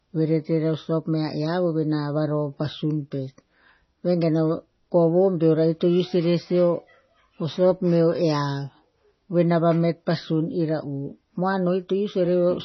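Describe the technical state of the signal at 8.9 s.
At 8.9 s the speech carries MP3 compression artefacts, as it does throughout the clip: nothing above 5.9 kHz and a watery, swirling texture. This points to a likely starved bitrate near 24 kbps, where the encoder drops weak frequency lines frame by frame.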